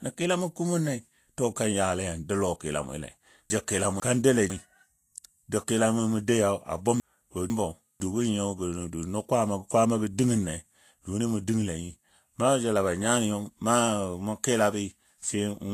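Speech throughout sounds hissy and grainy, with roughened tones, smeared consonant attacks and nothing above 14.2 kHz. That is likely Vorbis compression at a low bitrate near 36 kbps. Unlike MP3's metallic swirl, the treble here turns to noise-like grain of similar energy. At 3.5 to 4.5 s and again at 7.0 to 8.0 s, chunks out of order jumble the speech: a half-second piece plays one slot late. Nothing goes missing or repeats, which distinguishes it from a dropout or stutter.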